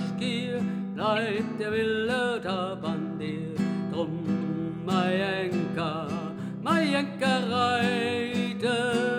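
Corrupt frame decoded at 1.16 s, 3.28 s and 4.41 s: a bit-damaged compressed frame is played anyway, leaving a short blip of misplaced energy, strongest at 1.16 s, faintest at 3.28 s.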